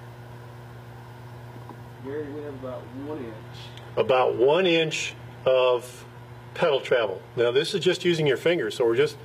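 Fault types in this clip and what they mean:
Adaptive stream at a lower bitrate: from 1.95 to 7.95 s the sound abruptly loses quality with no gap, codec artefacts rise and nothing remains above 14.9 kHz, pointing to a drop from about 96 to 20 kbit/s after the connection slowed.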